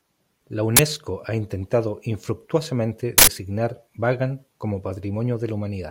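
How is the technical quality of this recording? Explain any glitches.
The recording has two glitches, both from an uninitialised buffer. At 0.77 to 0.79 s and 3.18 to 3.27 s, a block was played before audio was written to it. Leftover memory was heard as a loud crack in the first and a short, loud burst of digital noise in the second. The first lasts about 23 ms, consistent with a 1024-sample buffer. The second lasts about 93 ms, consistent with a 4096-sample buffer.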